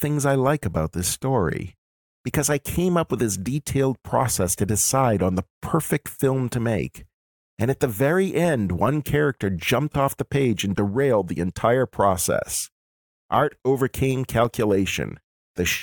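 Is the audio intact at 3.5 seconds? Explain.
Yes, the speech at 3.5 seconds plays through intact, with no audible fault at that moment.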